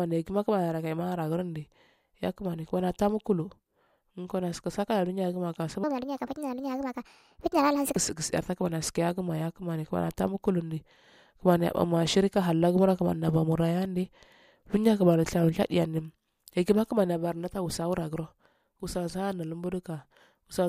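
Wrong sample rate, from 5.84 to 7.96 s: the speech suddenly runs 1.5 times too fast and about 7 semitones higher, which fits audio recorded at 32 kHz being played at 48 kHz without conversion, so speed and pitch rise together.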